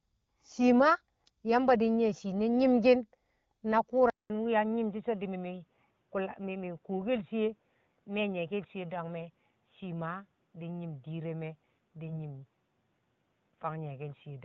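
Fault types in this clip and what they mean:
Input switched to a poorer device: likely the recording input changed at 4.1 s, after a 200 ms gap, cutting everything above 3.8 kHz and dropping the level about 5 dB.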